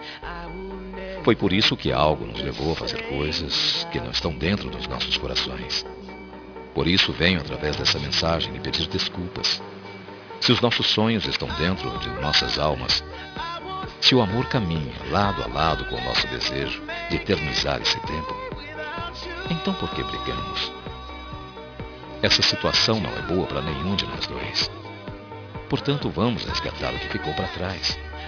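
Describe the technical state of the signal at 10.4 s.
At 10.4 s the audio has aliasing, which runs through the whole clip. The sample rate was reduced without an anti-aliasing filter, so content above the 5.5 kHz fold point was reflected back down into the band as unrelated, inharmonic frequencies. That points to a drop to roughly 11 kHz. The folded energy sits nearly as loud as the real signal, so the top end sounds gritty and metallic, and the spectrum is packed hard up to 5.5 kHz.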